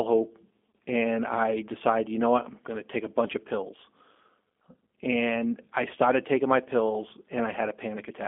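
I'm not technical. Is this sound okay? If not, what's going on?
No. The whole clip goes through the G.729 codec, a phone-call compression scheme that rebuilds the voice from a simple model of the throat and a few pulses. Everything above about 3.5 kHz is gone, so the speech sounds thin, muffled and noticeably rough and synthetic.

At 0.73 s, just before "and I decided you", there is VoIP packet loss concealed by the speech codec. About 40 ms of audio went missing, which fits two lost packets. The decoder filled the gap by stretching the last sound into a brief smear that fades, and the voice stays weak as it recovers.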